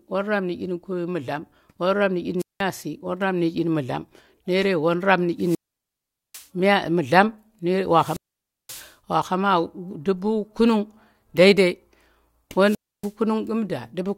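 The radio link from an analogue wireless microphone fades four times, and each time the receiver's squelch cuts the output, causing a wireless microphone squelch dropout. The speech gives way to a brief surge of hiss, then near silence: from 2.39 to 2.62 s (about 0.19 s muted), 5.39 to 6.48 s (0.80 s muted), 7.92 to 8.94 s (0.53 s muted), and 12.63 to 13.13 s (0.29 s muted), before the speech returns.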